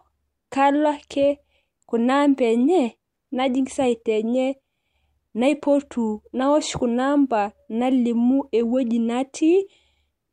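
No technical faults can be heard anywhere in the speech recording.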